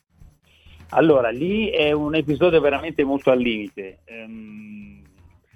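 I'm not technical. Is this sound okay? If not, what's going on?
Yes, nothing in this sound points to a technical problem. Where the volume goes up or down, it moves smoothly, the way a fader would.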